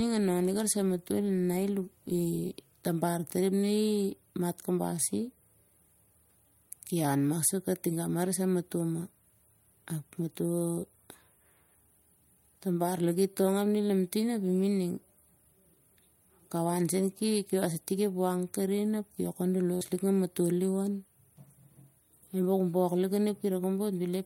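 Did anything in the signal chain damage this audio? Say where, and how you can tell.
Yes, the network stage damaged it. At 3.61 s, just after "tabar tari ap", there's short concealed packet loss: about 20 ms never arrived in time, so the decoder stretched the previous sound for roughly 15 ms and blended back. You hear it as a quick smear.

Around 19.75 to 19.83 s there's a burst of packet loss, about 60 ms gone. The receiver carried the last sound forward and faded it, giving a brief held buzz or fading hiss before the audio picks up further along.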